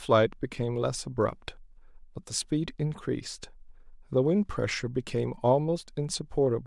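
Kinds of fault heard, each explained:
No faults can be heard anywhere in this recording.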